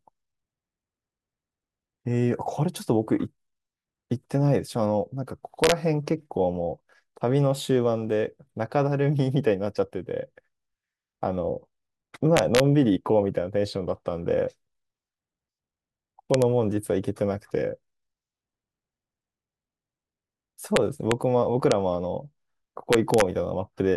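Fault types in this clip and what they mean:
Integer overflow: speech peaks that pass the largest integer value wrap to the opposite sign instead of flattening, giving violent cracks at six spots between 5.6 and 23.2 s, though only 0 to 1 dB over. Plain clipping would sound duller.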